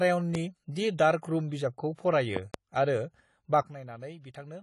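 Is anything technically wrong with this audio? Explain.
Yes, there are four kinds of technical fault: codec damage across the whole clip, two loud pop events, one pre-echo, and an abrupt level drop near the end.

AAC compression runs from start to finish and is plainly audible. Nothing is present above 11.4 kHz, which fits a low bitrate, likely around 32 kbps, in AAC-LC. At that rate the encoder lowers its cut-off and quantises the remaining spectrum coarsely against its hearing model, leaving holes or substitute noise in some bands. The speech comes across dull and smeared, with a warbling or fizzy texture on sustained sounds and sibilants.

A loud pop occurs at 0.35 to 0.37 s as a single pop, and again at 2.37 to 2.56 s as two pops, just after "रूम' बिजाबखौ". Each peaks at roughly 15 dB above the surrounding signal. The likely cause is a sudden voltage step or pulse added to the signal, whether from a plug, a switch, static or a driver glitch, which the following circuits shape into a sharp transient. 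The speech continues underneath each pop.

Pre-echo appears at 0.73 to 0.76 s, with about 30 ms of noise ahead of a sharp attack. The transform codec spreads its quantisation noise across the whole block, so noise sized for the loud onset also fills the quiet moment just before it. This is heard as a short hiss leading into the attack, which itself sounds softened and smeared.

A sudden gain jump occurs at 3.62 s, where the level drops by about 12 dB and stays down until the end of the clip. The likely cause is a digital gain change applied from one sample to the next with no ramp, such as a setting change or a bit shift. Speech and background noise fall together in a single step, so the drop is heard as an abrupt cut in loudness rather than a fade.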